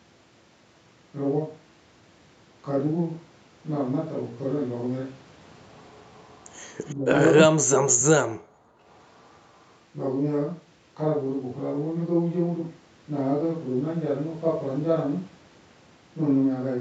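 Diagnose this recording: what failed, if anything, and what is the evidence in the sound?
Echo leak at the call-processing stage, from 5.86 to 6.95 s. A very faint delayed copy of the speech trails it by about 346 ms. The echo canceller likely left residual loudspeaker pickup in the microphone signal, and that residue was sent back.

Speech suppressed in double talk, also in call processing. At 6.94 to 7.07 s the speech dips briefly and shallowly. From 7.45 to 8.52 s it falls much deeper, close to silence, for about a second. The echo canceller likely mistook the talker for echo and turned both down.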